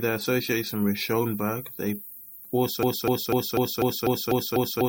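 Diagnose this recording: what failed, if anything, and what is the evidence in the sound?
A broken-record loop takes over at 2.83 s and runs to the end of the speech: one 0.25 s fragment repeats eight times, identical and back to back. A stalled player or stream buffer is the likely cause, with the missing audio lost. An echo would decay; these repeats don't.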